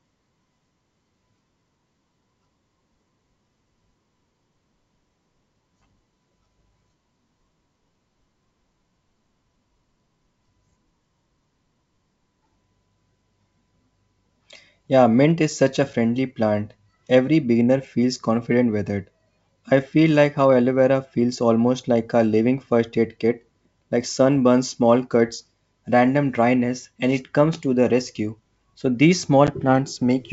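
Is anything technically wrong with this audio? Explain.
Yes. The G.722 wideband call at 64 kbit/s suffers packet loss on the ADPCM call at 29.47 to 29.49 s. About 10 ms, roughly one packet, went missing and was replaced by silence. The decoder's adaptive predictor and step size then drifted out of step with the sender's. The speech drops out in a hard-edged gap and comes back briefly disturbed before settling.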